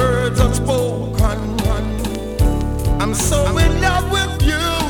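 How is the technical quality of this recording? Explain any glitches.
The recording has one clear glitch, a doubled audio track heard from 1.65 s to 3.57 s. In that span a second full-band copy of the sound runs about half a second behind the original and a few decibels quieter. Most likely the signal was picked up twice, once through a slower path or via an edit that left two misaligned copies layered together. The copy sounds dry, with no decay or room colouring, so it comes across as a distinct late repeat rather than an echo. It starts and stops abruptly at the edges of that window.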